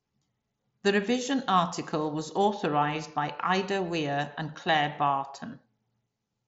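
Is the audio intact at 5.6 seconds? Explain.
Yes, the audio is intact at 5.6 seconds; the speech there carries only the usual character of the Bluetooth mSBC headset path, with nothing heard above about 7.7 kHz.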